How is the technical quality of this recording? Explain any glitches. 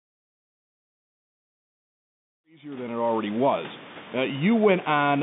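No glitches or technical faults can be heard here.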